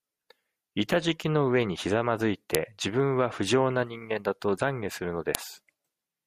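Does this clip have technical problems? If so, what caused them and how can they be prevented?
Yes. Sharp, loud clicks at 2.55 s, just after "ざまづい", and at 5.35 s, just after "悔するの", are a file header played as audio: header bytes from joined WAV pieces decoded as samples. Each shows as a sharp waveform spike and a thin vertical broadband line on a spectrogram. Strip headers from every piece before concatenating or streaming.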